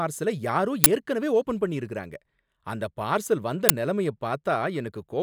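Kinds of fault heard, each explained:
Uninitialised buffer: a playback block went out before any audio had been written into it, so whatever stale data sat in memory was played as samples. In this speech it is heard as two abrupt, loud cracks, at 0.84 to 0.86 s just before "ஏற்கனவே ஓபன் பண்ணிருக்காங்க அந்த" and at 3.69 s right after "பண்ணிருக்காங்க அந்த பார்சல் வந்த". Each lasts one short block, which fits blocks of about 20 ms and 10 ms. A dropout would leave a silent gap and a click would be a single spike, but these are loud cracks.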